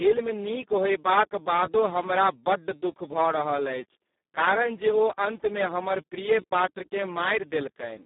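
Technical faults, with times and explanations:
Throughout, Speex codec damage: speech sounds hoarse, noisy and near-robotic, because at about 4 kbps this CELP coder has too few bits to model the excitation. Unlike plain band-limiting, the loss is in the voice's texture, not just its range. Only a narrow telephone band of roughly 200 Hz to 3.7 kHz survives, with nothing above 3.8 kHz.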